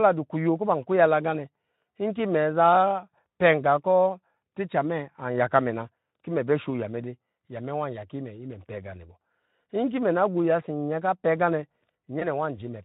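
This speech clip has one fault: VoIP packet loss concealed by the speech codec, near the end at 12.19 to 12.27 s. A single frame's worth of audio drops out, about 20 ms. The decoder fills the hole by extending its last pitch and filter at falling gain. That gives a short stretched sound that fades. Because each frame builds on the one before, the sound stays weak or distorted for tens of milliseconds more. The codec underneath sounds like Speex at a moderate rate, roughly 15 kbps.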